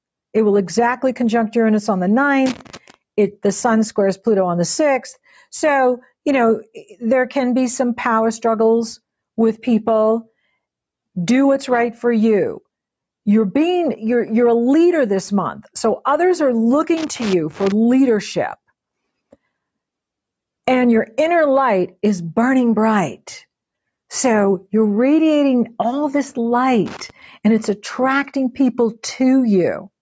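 Loose connector crackle appears three times: from 2.46 to 2.94 s, from 16.97 to 17.72 s, and from 26.86 to 27.10 s. Each is an irregular burst of crackle and scratching. A worn or dirty contact is making and breaking as it moves. That chops the signal on and off. Any DC on the line becomes a pop at each break. The second burst is the longest, at 0.75 s. The shortest is the last, at 0.24 s.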